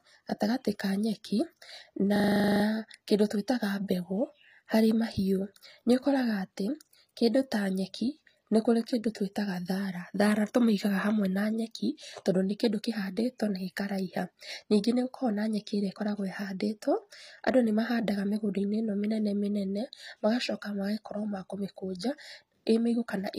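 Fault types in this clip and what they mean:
HE-AAC compression: The whole clip has a bright but artificial top end with plainly audible damage, likely from HE-AAC. The codec only really encodes the lower spectrum, then fakes the treble by copying lower bands upward and roughly shaping them, so the high harmonics don't line up with the real ones. Here the s sounds come out gritty and metallic, nothing reaches above 15.4 kHz, and the overall character fits a low bitrate around 24 kbps.
System hang loop: From 2.16 to 2.64 s the speech sticks on one tiny 40 ms slice of audio that repeats exactly, twelve times in a row. That's what happens when the computer or driver stalls but the sound hardware keeps cycling through the same buffer. With a loop that short it comes across as a buzzy 25 Hz stutter. Once it clears, the speech seems to pick up where it left off, with essentially nothing skipped.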